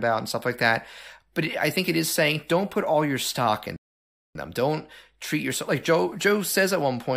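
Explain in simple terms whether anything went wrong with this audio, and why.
Something did go wrong: at 3.76 seconds the speech stops dead and stays silent until 4.35 seconds, adding a little over half a second. This is a rebuffering stall: the player used up the audio it had downloaded and waited for more. When the sound returns, it picks up exactly where it left off. A dropout would instead leave a piece missing, so the speech would jump ahead. Here the clip simply pauses, then continues.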